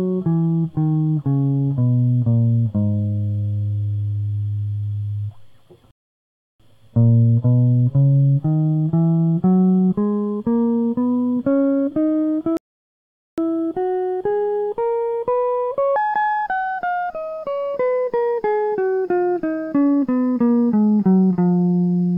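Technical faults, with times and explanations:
5.91 to 6.60 s and 12.57 to 13.38 s, rebuffering stall: the music drops to silence for about 0.69 s, then 0.81 s, and picks up exactly where it halted. Playback ran out of downloaded audio and waited. Unlike a dropout, no music is skipped; only time is added.
15.96 s to the end, section at the wrong speed: the music suddenly runs 1.53 times faster, with tempo and pitch rising together by about seven semitones, so it sounds hurried and bright. A pure pitch shift would leave the tempo alone. The likely cause is this stretch being played against the wrong clock.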